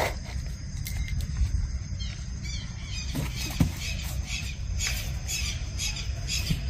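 No technical faults can be heard anywhere in the clip.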